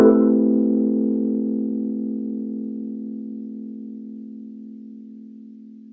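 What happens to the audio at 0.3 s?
Nothing goes wrong at 0.3 s: the sound is intact there, carrying only the ordinary character of call microphone processing, with the lowest bass trimmed and nothing above 8 kHz.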